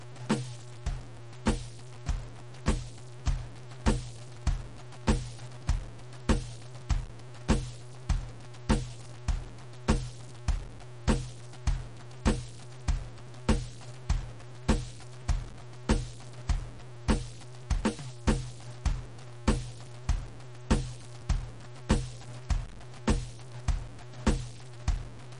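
Low bit depth without dither runs through the whole music clip, from the first second to the last. The music carries a gritty, grainy distortion that tracks the signal and sits roughly 20 dB below it, loud enough to hear constantly. The likely cause is values cut to very few levels by truncation, with no dither to break up the error, which fits a 6-bit signal. Because the error follows the waveform, it grinds along with the music rather than hissing independently.

MP3 compression damage is also present throughout and is plainly audible. Nothing remains above 10.6 kHz, so the treble stops abruptly and the top end sounds dull. The likely cause is an encoder running short of bits, which fits a bitrate around 52 kbps. It drops weaker frequency components and lets them flicker on and off between frames, which gives the music a watery, swirling texture layered over the grit.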